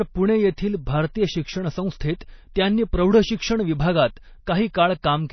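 Throughout the speech the sound is watery and swirly, with nothing above 6 kHz and sibilants turning metallic and chirpy. This is likely MP3 compression at a starved bitrate, something near 24 kbps, cutting the treble and switching weak frequency components on and off between frames.

From 2.54 to 2.56 s a brief hiss runs just ahead of a sharp onset, which itself sounds softened and smeared. That is pre-echo: the quantisation noise meant to be masked by the loud attack is spread across the whole transform block, spilling about 20 ms into the quiet before it.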